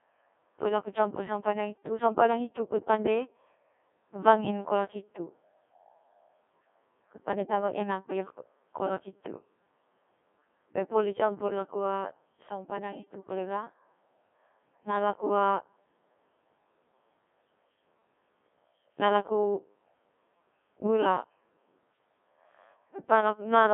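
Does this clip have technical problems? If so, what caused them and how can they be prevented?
Yes. Throughout, the speech passed through a Codec 2 vocoder, which fits its 1.6 kbit/s mode. Only pitch, voicing, energy and spectral envelope survive, resynthesised from sine waves, leaving heavy robotic buzz with nothing above 3.8 kHz. To prevent it, record or send the audio over a wideband, higher-bitrate path rather than a low-rate digital-radio vocoder.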